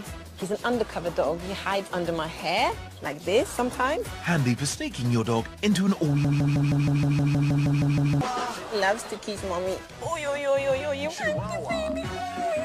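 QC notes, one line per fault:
6.25 to 8.21 s, broken-record loop: a fragment about 157 ms long repeats exactly, back to back, twelve times, so for nearly two seconds the sound sticks on one piece and whatever should have followed is gone. The likely cause is a player, encoder or stream that stalled and kept resending the last chunk it held. Unlike an echo or a stutter, every pass is identical in length and content, with no decay and no variation between repeats.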